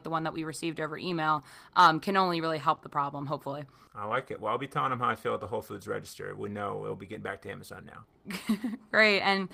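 At 1.09 s, just after "that we received over", there is a lost packet rebuilt from error correction. A 20 ms stretch, which points to a single lost packet, never arrived intact. The following packet carried a cheap, low-bitrate copy, and the decoder played that instead. Nothing drops out. The patch sounds briefly grainy and rougher than the speech around it, with no gap.

From 2.75 to 2.79 s, after "um can only really" and before "the problem", comes a short concealed packet loss. About 20 ms of audio arrived too late to play. The receiver covered the hole by carrying the last sound forward and then fading back into the real signal. It is heard as a quick smear or wobble in the speech.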